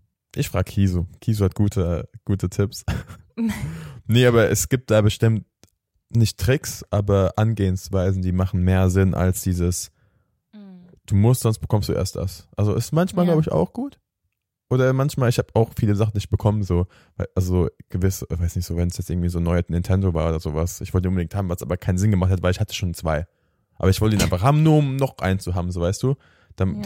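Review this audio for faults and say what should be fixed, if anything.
No faults; nothing to fix.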